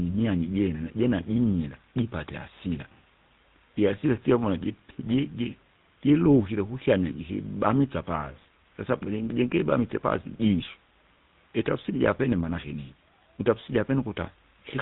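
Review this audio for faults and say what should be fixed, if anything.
The GSM full-rate codec runs throughout: regular-pulse excitation adds gravelly buzz, and the spectrogram stops abruptly at 4 kHz, which fits the 13 kbps full-rate codec. Prevent it with a wideband or uncompressed capture path instead of GSM.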